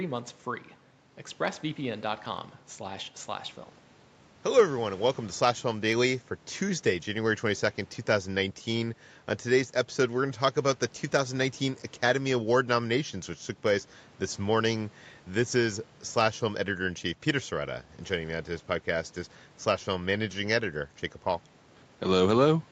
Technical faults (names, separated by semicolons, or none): none